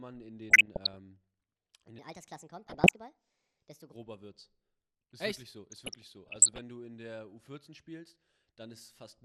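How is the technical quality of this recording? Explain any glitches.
The recording has clear technical problems. Codec damage runs through the whole speech clip. Three bursts of burbling and one section at the wrong speed sit on top of it.

MP2 compression is audible from start to finish. The sound is dull and gurgling. This is likely MPEG Layer II coding at a low rate, and the damage level fits something around 80 kbps. The encoder splits the audio into 32 sub-bands and shares out bits. With too few bits, upper bands drop out and the rest are quantised coarsely. That gives the grainy, muffled texture heard here.

DAB burbling appears three times: 0.50 to 0.98 s, 2.64 to 2.89 s, and 5.72 to 6.59 s. The last runs from just after "wirklich so" to just before "du in der". Each burst adds burbling over the speech. Bit errors, here at a low but damaging rate, slipped past error correction into the MP2 data. 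Corrupted samples put short blips of noise in single sub-bands, and corrupted scale factors make sub-bands jump in level for up to a frame.

A section at the wrong speed runs from 1.99 to 3.93 s. It plays 1.35 times too fast. Pitch rises by about five semitones along with the tempo, so the speech turns high and hurried. The likely cause is that this stretch was played or edited against the wrong clock. Speed and pitch change together because the samples are simply read out faster. The second burbling burst falls inside this section.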